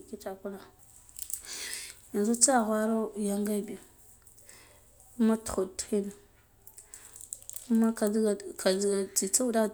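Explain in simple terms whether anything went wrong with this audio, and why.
Nothing went wrong with this speech recording, as no technical fault can be heard anywhere in it. There is no moment where the sound misbehaves, so there is no time to point to.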